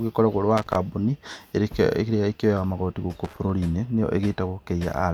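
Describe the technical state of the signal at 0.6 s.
At 0.6 s the speech is hit by loose connector crackle, running from about 0.57 to 0.76 s. A worn or dirty contact is making and breaking, chopping the signal into an irregular burst of scratchy crackle. Its ragged, uneven timing marks it apart from regular digital dropouts or clicks.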